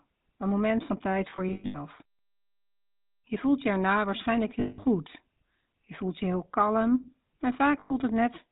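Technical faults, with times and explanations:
Throughout: GSM full-rate codec. The speech passes through the original GSM coder, which suggests about 13 kbps. It models the vocal tract and excites it with sparse, regularly spaced pulses. Nothing above 4 kHz survives. The result is a plainly audible buzzy, gravelly roughness.
1.30–1.76 s: lost GSM frames. Just after "een moment van tijd", frames drop out in scattered bursts, totalling 260 ms across roughly 440 ms. The longest gap is around 100 ms. The gaps repeat the last good frame, giving a rough metallic ring.
4.60–4.79 s: lost GSM frames. After "voelt je erna waarschijnlijk", 180 ms of frames are missing. The decoder keeps replaying the last good settings. The sound hangs as a metallic ring.
7.80–7.92 s: lost GSM frames. Here 100 ms of frames are lost. The last good frame is held and repeated. The result is a brief, gritty metallic ring in place of the speech.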